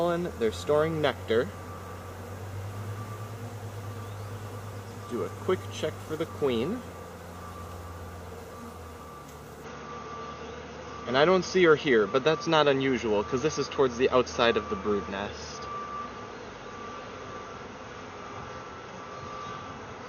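From 9.64 s to the end, the sound abruptly loses everything above 6.6 kHz, shifts level by a few decibels and gains a faint new noise floor, likely an input switched to a poorer device.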